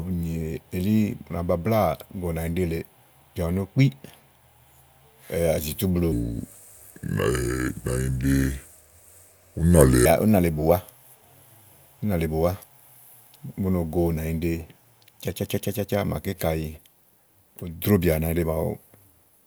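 From 6.12 to 10.06 s, a section at the wrong speed runs at 0.748x, deep and slow, roughly five semitones down, likely a clock mismatch.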